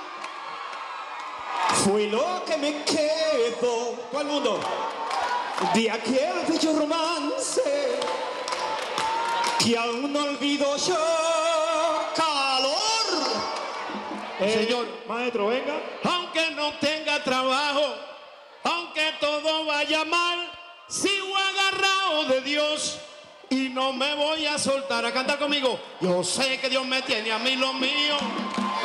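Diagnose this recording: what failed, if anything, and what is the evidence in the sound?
Nothing failed in this recording, and nothing in the sound points to a fault at any stage.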